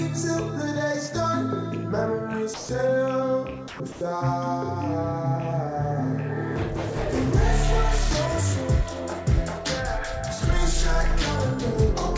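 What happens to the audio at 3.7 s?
At 3.68 s the sound cuts out for about 120 ms, until 3.80 s, and a flat, steady hiss fills the gap before it resumes. This is most likely sound dropped by the voice detector: the sending side judged that stretch to be background, stopped transmitting, and the receiver filled in comfort noise, losing about 100 ms of the sound. Packet-loss concealment would instead stretch or repeat the preceding sound, and a plain dropout would leave hard silence.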